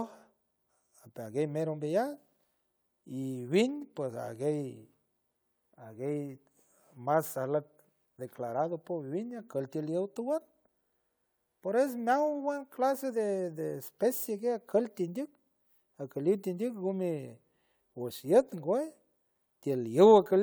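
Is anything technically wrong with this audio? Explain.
No, nothing in this speech recording points to a technical fault.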